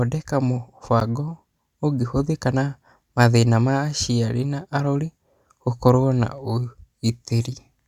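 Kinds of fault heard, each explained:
Block of digital silence: At 1.00 s the speech drops to silence for about 12 ms, then returns. The cut has no fade, and the gap sounds like a brief tick. The length fits a 512-sample buffer left unfilled.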